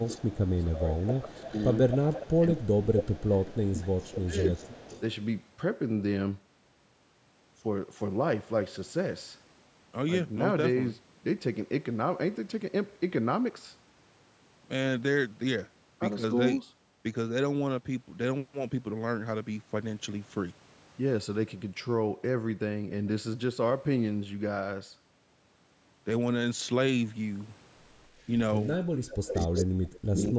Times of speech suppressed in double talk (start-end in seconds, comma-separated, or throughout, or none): 0.56-1.52, 2.61-4.56, 28.77-30.39